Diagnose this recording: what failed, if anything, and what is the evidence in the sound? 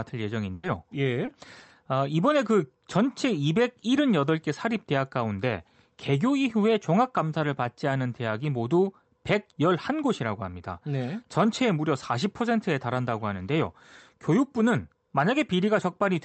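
The first failure is a burst of packet loss at the network stage, from 0.53 to 0.65 s. The receiver's concealment extended the last speech it had for about 100 ms, so the sound hangs and fades instead of moving on. When real audio returns, roughly 100 ms of the talker's speech is gone. The jump forward after the held, decaying tail is the giveaway. Concealment was bridging a run of consecutive lost or late packets.

A second, much smaller network fault, a short concealed packet loss, falls at 1.25 to 1.29 s. Only about 20 ms was missing, and the decoder patched it by continuing the preceding sound and crossfading back into the received signal. The result is a brief smear or slight wobble in the speech rather than an audible gap. Through the Opus call path, the speech sits band-limited to around 8 kHz on both sides of these events.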